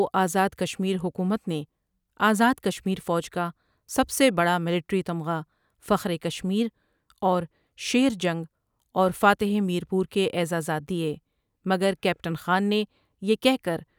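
No technical faults can be heard anywhere in this speech recording. There is nothing at any point that calls for a timestamp or a closer listen.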